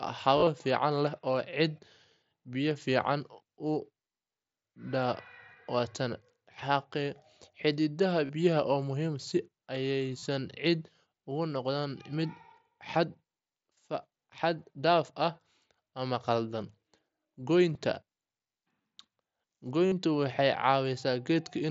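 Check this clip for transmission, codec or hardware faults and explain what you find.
The clip is speech over a wideband mSBC Bluetooth headset link, audible as a band limit near 8 kHz. The fault is concealed Bluetooth headset packet loss, at 0.36–0.47 s (about 60 ms lost, scattered), 8.25 s (37.5 ms), 10.19 s (37.5 ms), 17.73 s (15 ms), 18.82 s (22.5 ms) and 19.86 s (52.5 ms). Missing packets were filled by repeating recent waveform, which fits 7.5 ms frames. The longer runs give a brief buzzy, level-held tone with a warble at recovery, not the silent gap of an uncovered dropout.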